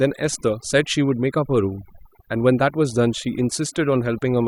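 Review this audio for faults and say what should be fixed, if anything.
Overdone noise removal affects the whole clip. The background drops, with small twinkling specks. The reducer was set too hard. It shuts down individual frequency bands close to its noise estimate, removing soft speech detail along with the noise. Apply lighter noise reduction and compare against the original by ear before committing.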